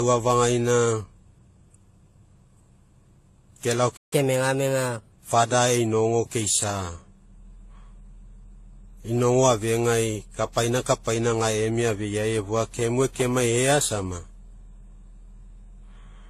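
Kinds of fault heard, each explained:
Transcoding between lossy codecs: The speech carries layered coding artefacts of more than one kind at once. This likely comes from a low-rate codec such as HE-AAC, re-encoded through AAC-LC and then WMA, each adding its own damage.
Playback stall: The speech cuts out in mid-flow from 3.96 to 4.13 s, silent for about 0.15 s. It then resumes from where it stopped. The likely cause is a player that ran short of data or had its thread blocked.
Catch-up at higher speed: Right after the gap, from 4.13 to 5.12 s, the speech runs 1.15 times faster. Pitch rises by about two semitones because the backlog is resampled to recover lost time. It then drops back to normal speed.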